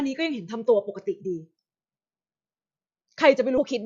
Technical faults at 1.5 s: none

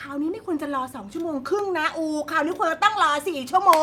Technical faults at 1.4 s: none

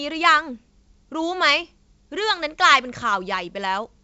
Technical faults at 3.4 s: none

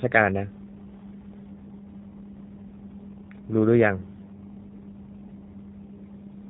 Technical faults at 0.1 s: G.729 codec

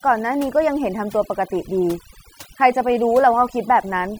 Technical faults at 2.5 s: overdone noise removal

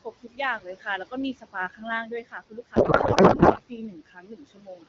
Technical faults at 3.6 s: noise suppressor artifacts; speech cut by the noise suppressor; codec payload misread

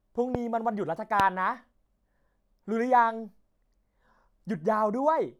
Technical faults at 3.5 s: none

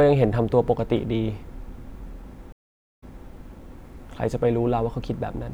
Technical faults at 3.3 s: stream reconnect

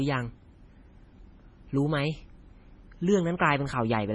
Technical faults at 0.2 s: MP3 compression

